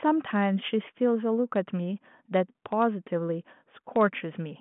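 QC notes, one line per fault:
Nothing to flag here, just telephone-band speech that tops out a little under 3.8 kHz.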